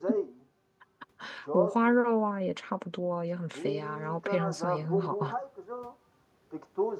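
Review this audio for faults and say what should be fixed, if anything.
Nothing to fix: no faults detected anywhere in the clip, so no corrective action is needed.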